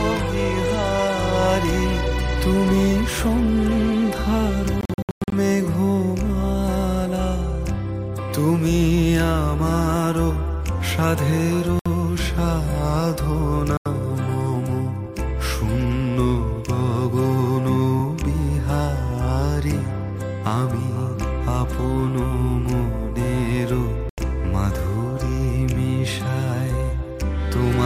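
At 4.81 s the sound breaks up into a stutter of short silences lasting until 5.32 s, about 340 ms lost in all, the longest gap about 107 ms. Holes follow at 11.79 s (64 ms), 13.77 s (85 ms) and 24.09 s (85 ms). This is likely Bluetooth dropout, wireless packets arriving too late to play. Unlike an edit or a pause, each gap has abrupt edges or a fade of a few milliseconds, and the sound resumes further along, as if it had kept playing.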